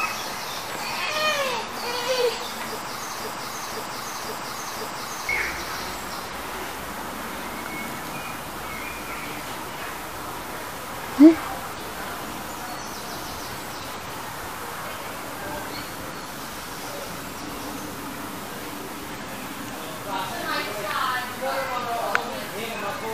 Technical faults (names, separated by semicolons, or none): broken-record loop